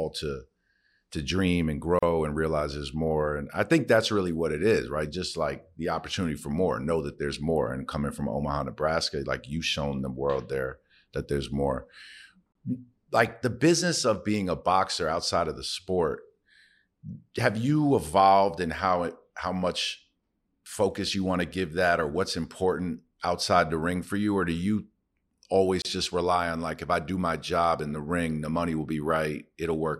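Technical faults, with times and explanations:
1.99 s, 12.52 s, 25.82 s: gap at a join of encoded pieces, with gaps of 36, 30 and 30 ms where untrimmed encoder delay and padding break the sound, with smeared edges, before it resumes.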